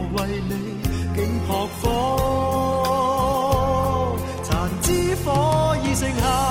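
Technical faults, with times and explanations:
0.00–5.01 s, adaptive stream starting at a low bitrate: the player opened on a lean version of the stream so playback could begin at once, and held it until it had gauged the connection. Over that stretch the top end is thin or filled in synthetically and codec artefacts are stronger, which points to an Opus encode near 16 kbit/s. At 5.01 s the quality jumps with no gap, consistent with a switch to roughly 64 kbit/s.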